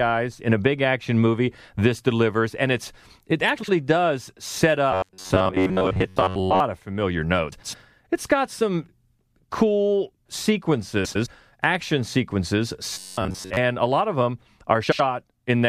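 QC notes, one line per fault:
3.57–3.69 s, 7.52–7.74 s, 11.05–11.27 s, 14.83–15.00 s: frames out of order. Two neighbouring blocks of speech play swapped, about 52, 105, 105 and 78 ms each. This gives a garbled flutter. No time is lost.
4.92–6.60 s and 12.94–13.57 s: robotic sound from repeated short buffers. Speech turns into a rigid metallic buzz near 93.8 Hz. It still roughly follows the syllables. Most of the real audio is skipped. The likely cause is a buffer of about 10.7 ms repeating while new audio arrives too seldom.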